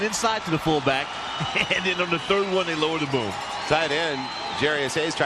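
From 0.71 s to 4.65 s, a click recurs every 1.32 s, about four in all. These are clock drift buffer slips, likely from two unsynchronised clocks differing by around 150 ppm, so the buffer periodically drops or repeats a few samples at each click.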